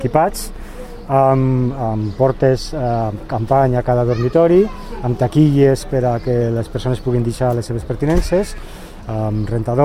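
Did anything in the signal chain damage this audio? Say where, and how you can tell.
No, nothing in the signal chain damaged this audio.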